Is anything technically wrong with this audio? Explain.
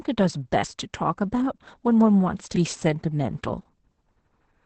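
Yes. Throughout the speech there is heavy Opus voice compression: the SILK linear-prediction coder, working in wideband mode at what sounds like roughly 10 kbps, codes the excitation coarsely and cuts everything above 8.6 kHz. The voice sounds muffled, hoarse and slightly robotic.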